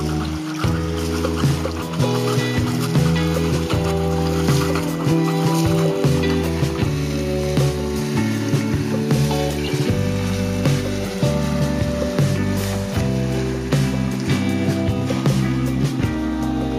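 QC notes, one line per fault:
No technical faults are audible anywhere in the signal.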